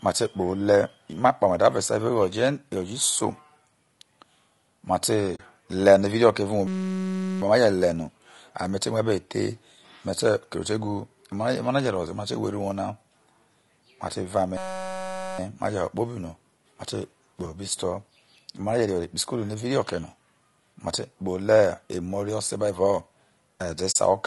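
Low-delay AAC compression runs through the whole recording. The speech is rough and grainy, with a hiss filling the gaps between voice harmonics and a thin, somewhat artificial top end. This is likely the low-delay AAC used in video calls. Its short frames can't separate pitch harmonics cleanly, and here the damage is plainly audible, which fits a low bitrate of around 32 kbps.

AAC frame loss with muting occurs at 5.35 to 5.40 s. The sound dips into a soft-edged silence of about 40 ms, which fits two lost frames whose spectrum the decoder zeroed. The overlapping windows fade the audio out and back in rather than cutting it, so the gap is a brief hollow.

A system hang loop follows at 6.67 to 7.42 s, then again at 14.57 to 15.39 s. Each time the audio freezes into a steady buzz at 188 Hz, a single 5.33 ms slice repeating exactly, about 140 and then 153 times. The computer or driver stalled while the sound hardware kept replaying the same ring buffer, which fits a 256-sample buffer. 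Almost no audio is lost around each loop.

A second AAC frame loss with muting comes at 23.91 to 23.96 s. It is another 40 ms faded hole with the same soft edges.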